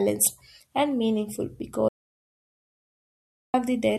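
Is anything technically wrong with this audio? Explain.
Yes. From 1.89 s to 3.54 s there is an audio dropout to silence, lasting about 1.65 s. The speech cuts off abruptly, leaving silence with no room tone. The input was likely lost while the recorder kept writing silence, so that speech is gone.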